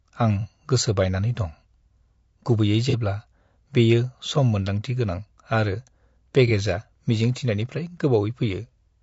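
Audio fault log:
throughout: low-delay AAC compression. The speech is rough and grainy across the whole clip. Noise fills the gaps between the pitch harmonics, and the top band sounds thin and synthetic. The likely cause is a low-delay AAC codec of the kind used in video calls, and the damage fits a bitrate around 32 kbps. Its very short frames cannot resolve the harmonics finely, and at this low bitrate too few bits remain for clean detail.
0.41 s, 2.90 s, 6.47 s: AAC frame loss with concealment. At each of these times a brief smeared, noisy patch interrupts the speech, lasting about 30 ms. The first comes just before "गोसो बायनानै दं". Each fits a single lost frame. The decoder has no data for that moment, so it rebuilds it from the last good spectrum. That guess lacks the true detail and phase, which is why it sounds blurred rather than silent.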